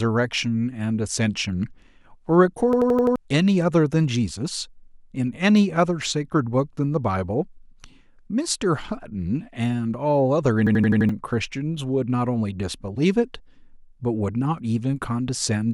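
A system hang loop strikes twice in this speech, from 2.73 to 3.16 s and again from 10.67 to 11.09 s. Each time the playback side stalled while the audio hardware kept replaying its last filled buffer, so one 85.33 ms slice repeats five times at 11.7 Hz. That fits a 4096-sample buffer. The result is a rapid machine-gun stutter, and nearly half a second of the real speech is lost behind it.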